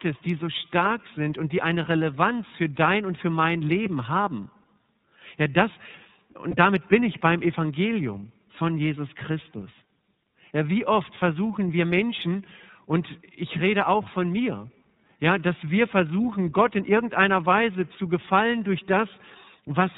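From the start the speech runs through the iLBC codec, with plainly audible damage. Nothing passes above 4 kHz, so on a spectrogram the energy stops at a flat ceiling with an empty band above it. Each frame's excitation is coded on its own, which leaves the voice slightly rough and synthetic. The sound fits iLBC's 30 ms frame mode at 13.33 kbps.

At 6.50 to 6.55 s, just before "damit bin ich beim", a stretch of lost iLBC frames (about one 30 ms frame's worth) leaves a hole that the decoder fills by repeating the last pitch cycle mixed with noise. It is heard as a brief held, faintly buzzy vowel. In the waveform the short section shows repeating periods overlaid with noise, and on a spectrogram it shows flat, unchanging harmonics with added noise. Because iLBC frames stand alone, the voice is correct again almost at once.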